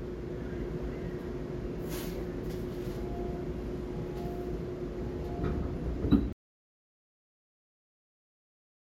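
A recording of sounds that suffers an audio dropout to silence at 6.33 s: the sound stops abruptly mid-flow and the remaining 2.5 s to the end are silent with no room tone. The likely cause is lost input, such as a disconnected device or a mute, while recording continued.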